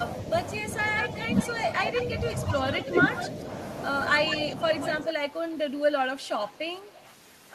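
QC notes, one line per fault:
1.17–2.04 s, echo leak: a delayed copy of the speech trails it by 189 ms at roughly 10 dB below, likely a far-end loudspeaker echo the canceller failed to remove.
2.86–3.27 s, echo leak: the same 189 ms copy returns briefly at a similar level.
4.3–5.13 s, echo leak: the strongest stretch, with the 189 ms copy only about 5 dB under the speech.
6.21–7.05 s, echo leak: the delay grows to 216 ms and the copy is faint, about 25 dB down.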